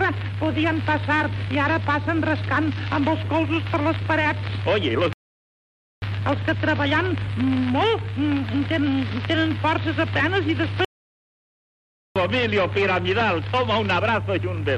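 At 5.13 s the sound halts mid-flow and stays silent for 0.89 s, resuming at 6.02 s; a longer break follows from 10.85 s to 12.16 s, lasting 1.31 s. These are playback stalls, most likely the player starving for data or its thread being held up. Unlike a brief dropout or a packet-loss click, each gap is a clean, sustained silence lasting most of a second or more, after which the audio carries on.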